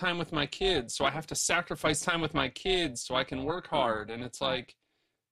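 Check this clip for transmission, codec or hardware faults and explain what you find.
One fault runs through the whole speech clip: overlap-add ripple. The level ripples, rising and falling by about 11 dB around 300 times a second, which gives the speech a metallic, robotic buzz with extra tones around the voice. The audio was split into short windowed frames and then rejoined with an overlap whose windows do not add up to a steady gain. Each frame boundary therefore leaves a dip or bump in level, repeating at the frame rate.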